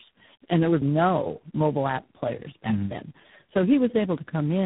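From start to finish the speech sounds rough, muffled and warbly, with nothing above 3.8 kHz. This is tandem speech coding: the call appears to have crossed several speech codecs in a row, each re-coding the previous coder's already degraded output.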